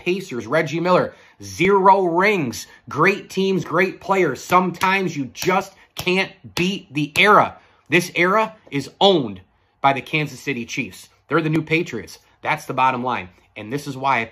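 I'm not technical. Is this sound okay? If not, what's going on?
No. There are tiny clicks or skips at 1.65, 3.64, 5.62, 7.60, 9.58, 11.56 and 13.55 seconds, roughly every two seconds. This is overlap between stream segments: the audio arrives in 2-second pieces whose timings overlap, so the player trims a sliver at each join.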